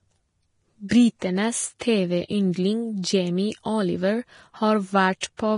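Vorbis compression runs through the whole clip. The speech sounds hissy and grainy, with nothing above 10.5 kHz. The treble detail that remains is coarse noise rather than clean texture. This heavy damage is likely from a low-bitrate Vorbis encode, consistent with roughly 30 kbps.

Pre-echo appears at 0.89–0.91 s, 1.19–1.22 s, 1.79 s, 3.02 s and 5.20–5.23 s. Each sharp onset is preceded by a brief hiss lasting about 17 to 28 ms. The codec spread quantisation noise across its block into the quiet moment before the attack, so these onsets sound smeared.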